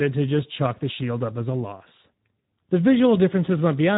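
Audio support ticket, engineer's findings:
Speex codec, throughout the clip. Speech plainly hoarse and noisy; nothing above 3.8 kHz. CELP coder starved of excitation bits, so residual comes out rough. Band limit points to narrowband Speex; damage level fits roughly 11 kbps.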